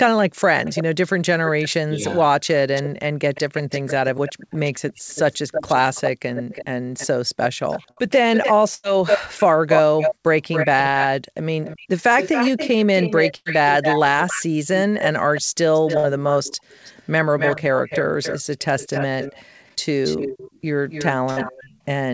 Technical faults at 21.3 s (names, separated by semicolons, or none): echo leak; burst of packet loss